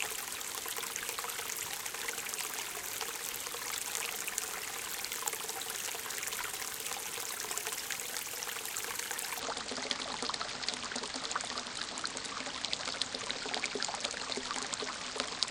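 From 9.40 s to the end at 15.50 s, the audio abruptly sinks and drags: everything drops by roughly ten semitones, close to an octave, and unfolds at about 0.56 times its proper pace, so events stretch out and sound heavy and sluggish. This is a section at the wrong speed, likely played back against the wrong clock, which slows timing and lowers pitch together, exactly as this sudden deep, slow stretch does.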